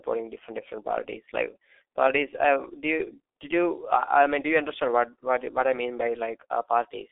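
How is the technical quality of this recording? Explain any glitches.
The quality is poor throughout because of heavy low-bitrate telephony coding. G.723.1 codec damage runs the full clip. The 30 ms frame coding, at a rate consistent with about 6.3 kbit/s, updates its vocal model slowly and keeps only roughly 300 Hz to 3.6 kHz, with nothing above 3.7 kHz. The speech sounds muffled and hoarse, and its consonants are smeared.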